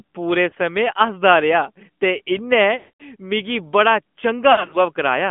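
Speech heard through the AMR narrowband mobile codec throughout: the band runs only from 200 Hz to 3.4 kHz, with plainly audible buzzy, synthetic coding damage that fits a mid-rate mode near 10 kbps. Lost AMR speech frames interrupt it three times, with the decoder repeating the last good settings at falling gain. At 0.50 to 0.54 s there is a brief 20 ms dip, consistent with a single lost frame. From 2.78 to 3.03 s about 220 ms is lost, so the sound drags out and fades to silence before recovering. From 4.52 to 4.78 s, about 140 ms of losses are scattered across 200 ms, with the longest gap at 60 ms, giving repeated brief dropouts.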